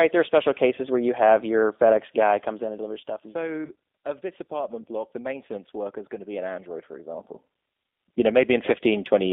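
Thin, slightly rough and synthetic-sounding speech runs through the whole clip. The band stops at about 250 Hz at the bottom and 3.6 kHz at the top, and the codec damage is plainly audible. This is the G.729 codec, specifically its G.729A variant, and the sound points to an 8 kbit/s stream. It rebuilds each 10 ms frame from a vocal tract filter, a pitch estimate and a handful of pulses, so fine detail is replaced by a coarse, synthetic approximation. From 3.65 to 3.71 s the speech briefly smears into a stretched sound that sags in level before normal sound returns. This is VoIP packet loss concealed by the speech codec. About 20 ms of audio went missing, which fits two lost 10 ms frames. The decoder filled the gap by repeating its last pitch and filter with falling gain. Because each frame leans on the previous one, the distortion lingers for tens of milliseconds past the gap itself. From 7.0 to 7.88 s a fine ticking, zipping texture rides on the sound as the level changes by about ten decibels. 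That is zipper noise: the change was applied in steps of about 1 dB, roughly thirty times a second, with no smoothing, so each step leaves a small click.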